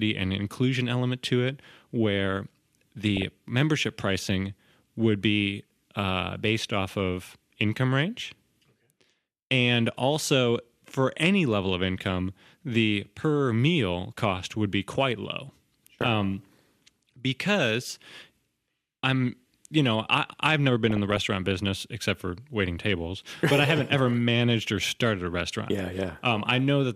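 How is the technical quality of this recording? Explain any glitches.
Speech quality is marred by two brief bursts of DAB burbling.

Weak DAB reception let bit errors slip past error correction into the MP2 audio, corrupting samples and possibly scale factors in individual sub-bands. The result is watery, bubbling blips, from 3.17 to 3.24 s just before "membership pricing would be", and from 20.90 to 21.21 s between "I have never been" and "business except for waiting".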